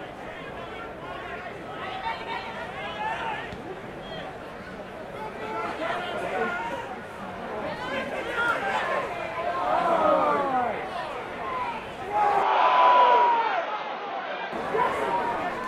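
Input switched to a poorer device, from 12.43 s to 14.53 s: the sound abruptly turns duller, with nothing above 6.5 kHz, and drops by about 5 dB, with no gap at the switch. A new, low background noise appears, roughly 45 dB below the signal. The likely cause is the system changing its input mid-recording to another microphone or a headset's call profile with a narrower band. At 14.53 s the full-band sound returns.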